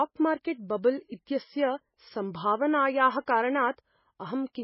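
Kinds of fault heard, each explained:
MP3 compression: The speech sounds watery and swirly, with metallic, chirpy s sounds and nothing above 5.6 kHz. The cause is likely heavy MP3 coding at a bitrate near 16 kbps, where the encoder cuts the treble and zeroes weak frequency lines that flicker between frames.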